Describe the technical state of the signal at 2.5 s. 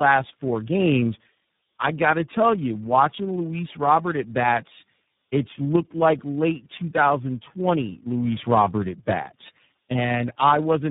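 At 2.5 s the speech carries tandem speech coding throughout. It sounds like three speech codecs decoding and re-encoding in turn, which compounds the damage into rough, muffled, warbly speech with nothing above 3.8 kHz.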